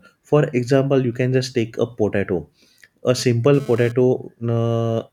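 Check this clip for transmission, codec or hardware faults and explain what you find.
GSM phone buzz from 3.18 to 3.92 s: a nearby 2G phone's data bursts at about 217 Hz get rectified by the audio circuit, producing a raspy, harmonic-rich buzz about 20 dB below the speech.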